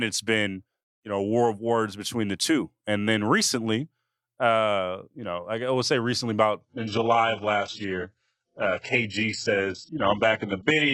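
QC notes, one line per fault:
6.61–10.94 s, adaptive stream at a lower bitrate: after "I would say recently" the player switched to a far leaner stream, cutting everything above 8 kHz abruptly, with rising artefacts and no gap.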